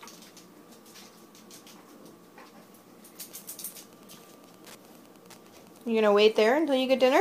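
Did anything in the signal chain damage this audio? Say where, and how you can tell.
Yes, Wi-Fi interference at the analogue wiring: from 3.20 s to the end, ticks every 102.4 ms, about 35 dB down, are a nearby radio's rectified beacon.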